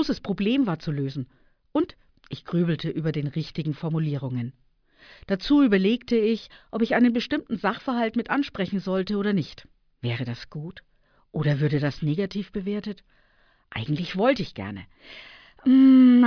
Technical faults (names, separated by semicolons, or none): none